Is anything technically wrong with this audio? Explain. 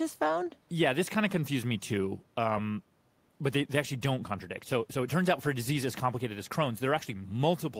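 No technical faults are present.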